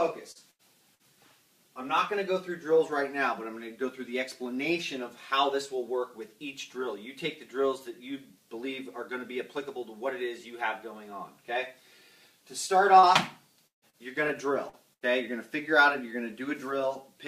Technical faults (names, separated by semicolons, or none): short concealed packet loss; burst of packet loss; chunks out of order